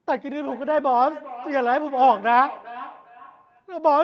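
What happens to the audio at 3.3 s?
At 3.3 s there is feedback echo between two devices, running from 0.46 to 3.71 s. A second device plays the call back, and the first microphone picks it up again. The speech returns roughly every 0.4 s, thinner and ringing, at about 17 dB below the speech at its loudest.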